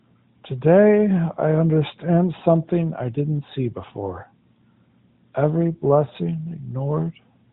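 No technical faults can be heard in the speech. It carries the band-limited sound of the AMR narrowband mobile codec, with nothing above 4 kHz and only light coding damage, which fits the codec's higher 12.2 kbps mode.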